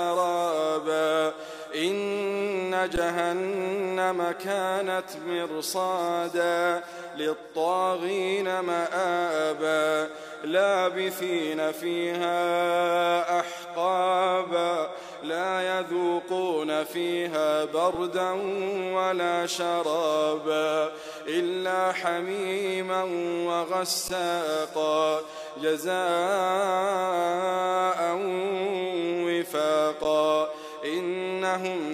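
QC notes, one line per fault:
2.96 to 30.04 s, underrun with held sample: at 2.96, 17.95, 24.08 and 30.04 s the output buffer ran dry and the converter held its last value. The waveform freezes flat for about 11.6 ms each time, or 3.1 ms at 17.95 s, which fits a 512-sample buffer. The sound then resumes right where it paused, so each stop and restart is a soft hiccup rather than a click.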